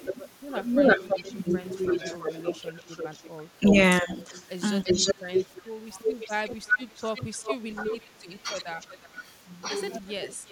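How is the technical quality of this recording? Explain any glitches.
The recording has clear call-processing faults: a repeating echo and the speech being pushed down in places.

Echo leak, 0.05 to 9.04 s and 10.1 to 10.51 s: a loudspeaker echo likely escaped cancellation, so a copy of the speech returns about 0.34 s later, first nearly as loud as the original, then around 15 dB quieter and 0.36 s behind.

Speech suppressed in double talk, 0.11 to 6.11 s, 7.75 to 7.9 s and 9.04 to 10.51 s: the canceller likely mistook overlapping talk for echo and turned the speech down. It dips by up to about 10 dB, briefly by about 5 dB, then by up to about 20 dB.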